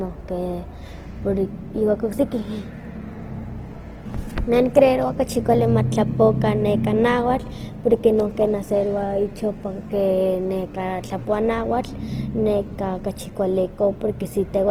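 Speech, grainy and rough throughout with noise-textured tones, though the top reaches 20.2 kHz; likely Opus compression in music mode, fitting a rate near 16 kbps.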